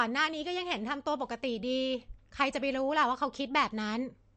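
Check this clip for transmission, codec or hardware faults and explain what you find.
One codec fault runs through the whole clip. The speech was likely squeezed through MP3 compression at a low bitrate, which fits roughly 48 kbps. Short of bits, the encoder cut everything above 8.3 kHz and dropped weak frequency lines that flicker between frames. The result is dull, watery, swirling speech with smeared attacks.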